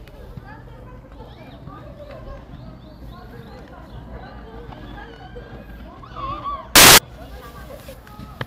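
From 6.76 to 6.98 s, samples built from the wrong bytes turn the low bits into loud, harsh broadband noise: a full-band spectrogram block and a suddenly dense waveform.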